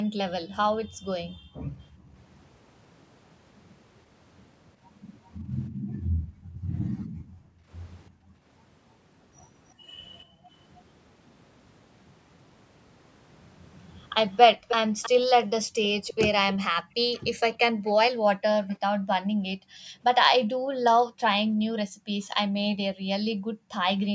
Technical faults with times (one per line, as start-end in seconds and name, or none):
0.04-2.14 background gated by the echo canceller
5.70-8.46 background gated by the echo canceller
9.69-9.73 echo leak
9.74-10.52 background gated by the echo canceller
14.31-18.76 echo leak
14.56-14.68 background gated by the echo canceller
15.64-23.78 background gated by the echo canceller